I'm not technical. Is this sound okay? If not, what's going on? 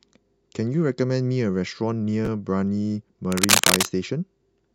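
No, there are two problems. Around 2.25 to 2.28 s the speech briefly jumbles. That's chunks out of order: a tiny slice, roughly 12 ms, got played one slot late, so the sound jumps around it.

From about 3.32 to 3.91 s there's a rough scratching, rustling noise riding over the speech, louder than the talking itself. That's cable scratch noise, most likely a worn cable or connector being moved and losing solid contact.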